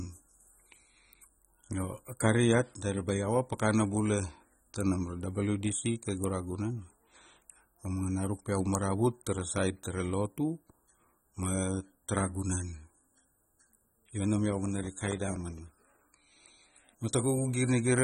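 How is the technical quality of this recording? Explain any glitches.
The recording has plainly audible coding damage throughout and one burst of crackle near the end.

Throughout, nothing is heard above 16.5 kHz and the speech sounds smeared, likely from AAC compression at a low bitrate near 24 kbps. It is constant, unlike a transient glitch.

From 14.84 to 15.81 s, processor overload crackle: roughly forty missed deadlines on tiny buffers of about 1.5 ms each leave gaps of silence, heard as crackle that stops once the load passes.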